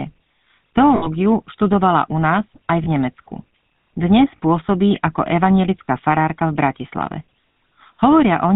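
Speech, heard through a GSM full-rate codec throughout. The damage is plainly audible. Nothing above 4 kHz survives. The voice has a buzzy, gravelly roughness from pulse-driven vocal-tract modelling, which fits the 13 kbps full-rate coder. There are also lost GSM frames at 0.96 to 1.08 s, 2.84 to 2.88 s, 4.36 to 4.40 s, 5.87 s and 7.52 to 7.56 s. Each gap is patched by repeating the last good frame, so the sound briefly holds as a metallic ring. The longest gap, 60 ms, matches three 20 ms frames.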